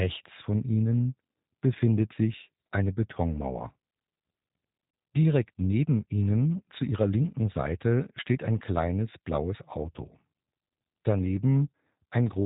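From start to finish the speech sounds narrow, slightly rough and synthetic, with a buzzy, reconstructed edge and nothing audible above about 3.8 kHz. This is plainly audible G.729 codec damage. Rather than carrying the waveform, the coder rebuilds the speech from a vocal tract filter, a pitch predictor and a few pulses in each short frame, which fits an 8 kbit/s G.729A stream. The missing fine detail gives the voice its artificial texture.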